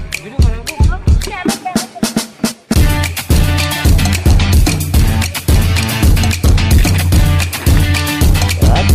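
From 2.52 to 2.69 s the sound and its background abruptly drop about 6 dB together, a sudden gain jump, likely from gain applied without a ramp.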